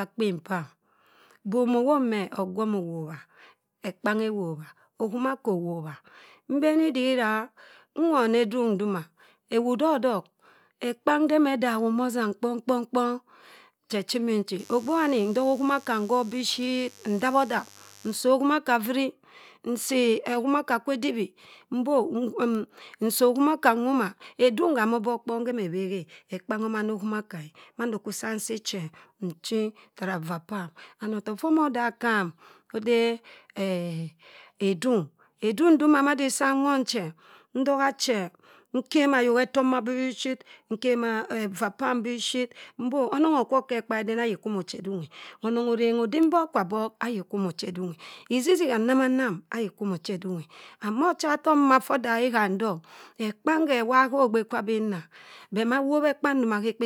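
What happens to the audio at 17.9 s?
At 17.9 s a steady, raspy buzz sits under the speech, roughly 30 dB below it. It begins at 14.59 s, just after "che chimi'nchi", and stops at 18.17 s, right before "okhimaka frui". This is mains buzz. Sharp switching spikes from a dimmer, a rectifier or an unshielded line get into the signal twice in each 50 Hz cycle, and they spread harmonics of 50 Hz up into the kilohertz range, which gives the buzz its rasp.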